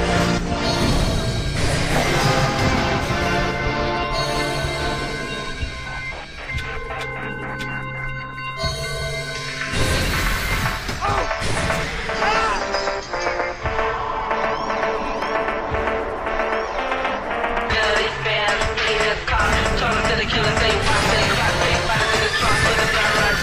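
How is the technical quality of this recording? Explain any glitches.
The recording has two kinds of glitch: a doubled track near the start and two tiny dropouts later on.

From 0.89 to 5.51 s there is a doubled audio track. A second full-band copy trails the original by about a fifth of a second and sits roughly 10 dB lower. It is likely a second capture path or an edit holding two copies out of step. Unlike an echo or reverb, the copy never decays and has no room colour, and it begins and ends abruptly.

At 15.22 s and 17.61 s there is a block of digital silence. The samples drop to silence for about 0.73 ms and 0.23 ms, consistent with an output buffer not being filled in time. With no fade at either edge, each gap is heard as a tick or dip rather than an audible hole, which distinguishes it from a longer dropout.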